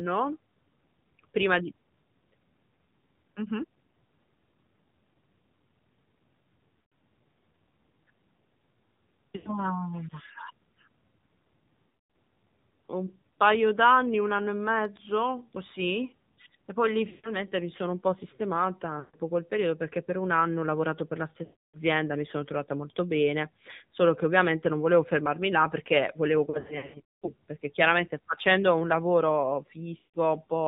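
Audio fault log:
Throughout, AMR narrowband mobile codec. The speech is coded at 7.4 kbps from 8 kHz sampling, so nothing above 4 kHz survives. A few pulses drive a vocal tract model, and at this low bitrate the voice sounds plainly buzzy and synthetic.
6.82–6.92, 9.36–9.50, 11.94–12.13, 17.10–17.32, 19.00–19.16, 21.44–21.77, 26.50–27.33 and 29.98–30.17 s, lost AMR speech frames. The decoder reuses the last pitch and vocal tract settings at falling gain. Each gap smears, then fades toward silence. The longest comes after "fermarmi là perché volevo".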